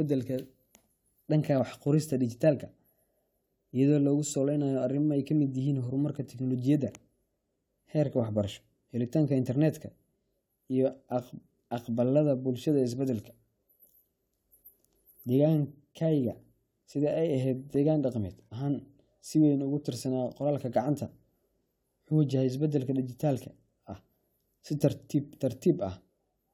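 Speech recording with no technical faults audible anywhere in the clip.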